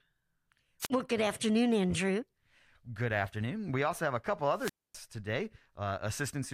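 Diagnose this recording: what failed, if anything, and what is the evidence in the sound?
The failure sits in the analogue radio link, ahead of the converter: a wireless microphone squelch dropout, twice. From 0.81 to 0.90 s the speech thins into a brief rise of hiss and then a mute of about 39 ms. From 4.54 to 5.01 s, right after "also have a couple", the same happens with a longer hole of about 253 ms. The fading FM carrier lets noise climb until the receiver's squelch gates the output shut. That hiss before the silence separates it from network packet loss, which cuts cleanly or is smoothed over.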